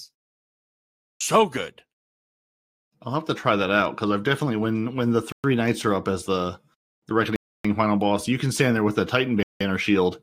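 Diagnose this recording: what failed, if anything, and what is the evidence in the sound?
A Bluetooth stall at the playback stage: the headphone buffer likely ran dry, so speech cuts to silence at 5.32 s (0.12 s), 7.36 s (0.29 s) and 9.43 s (0.18 s), then resumes.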